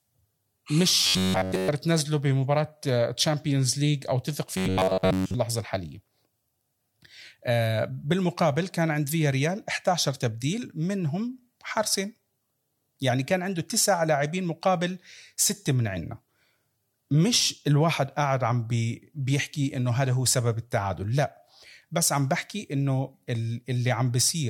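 From 1.03 to 1.68 s, and again from 4.57 to 5.36 s, the speech collapses into a rigid metallic buzz near 94 Hz. That's robotic sound from repeated short buffers, likely a starved stream looping roughly 10.7 ms chunks: the whole first stretch, most of the second.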